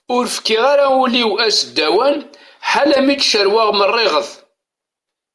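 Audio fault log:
No faults can be heard in this speech recording. Nothing in it calls for an entry in this log.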